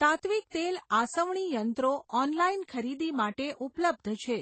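Throughout the speech, the sound carries a stacked, doubly smeared quality that points to transcoding between lossy codecs, likely an MP3 encode at around 32 kbit/s later re-encoded as Vorbis at a similar low rate. Nothing survives above 8.4 kHz, so consonants sound dulled, while swirly, watery artefacts from both encoders overlap. On a spectrogram, energy stops at a hard ceiling near 8.4 kHz, with blotchy, quantised patches beneath it.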